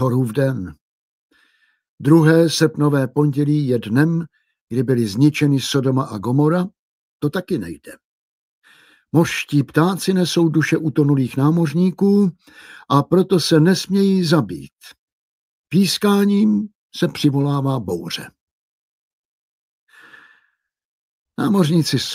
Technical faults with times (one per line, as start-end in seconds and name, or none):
none